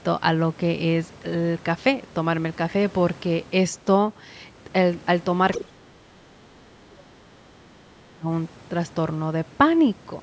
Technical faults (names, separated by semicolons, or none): other side's voice leaking through; speech suppressed in double talk